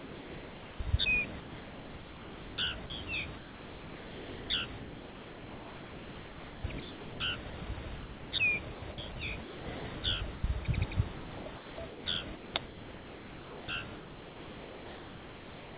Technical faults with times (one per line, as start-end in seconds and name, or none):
0.00-0.80 sound dropped by the voice detector
1.40-10.44 sound chopped by the voice detector
11.16-15.77 sound chopped by the voice detector